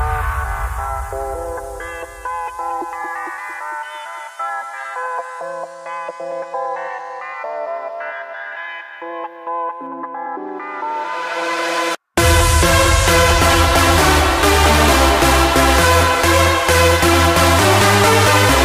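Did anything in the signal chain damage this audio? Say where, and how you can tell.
Yes: pre-emphasis left on, 0 to 9.87 s. Playback skipped the 75 µs de-emphasis, so 10 kHz sits about 13 dB high, and the spectrogram's treble glares brightly.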